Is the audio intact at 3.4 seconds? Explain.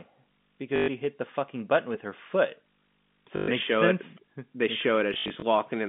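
No. Between 3.36 and 3.48 s, just before "show sense", 120 ms of packets went missing, which fits six 20 ms packets, and the receiver kept replaying the last one it had. These repeats rarely line up with the pitch, and the run becomes a brief robotic stutter buzzing at about 50 Hz.

A display or video cable is also coupling into the audio, so at 3.4 s, as everywhere in the clip, there is video or display buzz: a 50 Hz field-rate buzz with hash above it and a 15.6 kHz line tone, about 35 dB below the speech.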